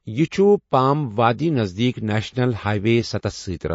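MP3 compression runs throughout the speech and is the likely cause of its plainly audible damage: nothing is left above 7.6 kHz, and weak frequency components blink in and out between frames, giving a watery, swirly quality that fits an encoder starved at about 32 kbps.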